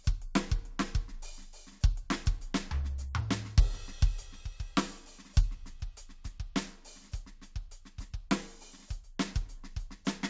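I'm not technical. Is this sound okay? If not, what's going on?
Yes, nothing wrong can be heard in this music.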